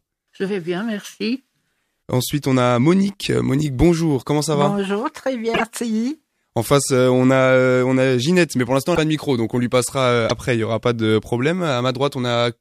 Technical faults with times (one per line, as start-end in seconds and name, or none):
5.53-5.61 broken MP3 bit reservoir
8.94-8.98 broken MP3 bit reservoir
10.29-10.31 broken MP3 bit reservoir